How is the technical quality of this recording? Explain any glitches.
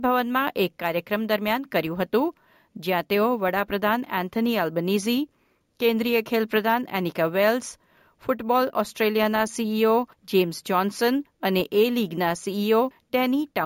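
The recording has one fault, present for the whole clip: imaging from sample-and-hold upsampling. The speech appears to have been raised from a 16 kHz rate to 48 kHz by simply repeating samples without a smoothing filter. That leaves mirrored spectral copies between 8 and 16 kHz, about 20 dB below the speech. The result is a bright metallic fizz that rises and falls with the speech. Its lowest image moves opposite to the pitch.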